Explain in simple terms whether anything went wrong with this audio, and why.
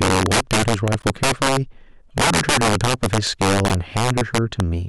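Sharp, violent cracks run through the speech wherever it gets loud, harsher and more sudden than ordinary distortion. This is integer overflow. The signal was pushed well past the largest value the system can store, and instead of being held at that ceiling, the loudest peaks wrapped around to the opposite extreme. Only a small share of the sound is affected, but each of those peaks snaps from one end of the range to the other, which is what makes the cracks so abrupt.

Three brief glitches also interrupt the speech: a faint one from 0.99 to 1.05 seconds, a very loud one at 2.23 seconds, and a strong one from 3.66 to 3.71 seconds. Each is a corrupt frame decoded. The audio was stored in small compressed chunks, some of which were damaged, and the player played them anyway. The garbled data put sound at the wrong pitches for a moment, across a few chunks in the first glitch, a single chunk in the second and a couple in the third.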